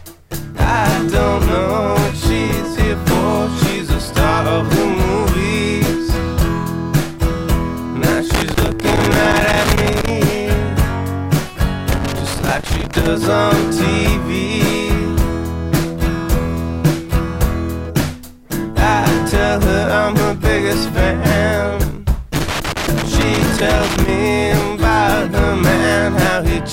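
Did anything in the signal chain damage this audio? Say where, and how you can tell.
Yes, in the analogue wiring: loose connector crackle appears from 8.30 to 10.10 s, 11.90 to 13.07 s and 22.34 to 24.08 s. Each burst is an irregular spray of scratching, as a worn or dirty contact makes and breaks, chopping the signal. Unlike buffer underrun clicks, which leave clean gaps where the buffer runs empty, this crackle is irregular scratching and lasts over a second at a time.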